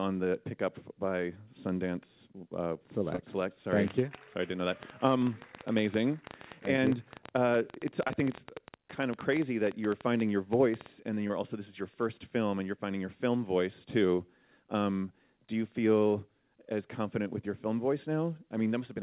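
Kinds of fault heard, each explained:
Short concealed packet loss, at 3.16, 6.76, 8.08, 11.28 and 14.16 s: each time about 20 ms never arrived, and the receiver continued the preceding sound across the gap, leaving a brief smear.
Train of clicks, 3.88 to 10.87 s: roughly 70 similar pops at an irregular 9 per second, up to about 10 dB above the sound, likely from interference or a faulty connection or power supply.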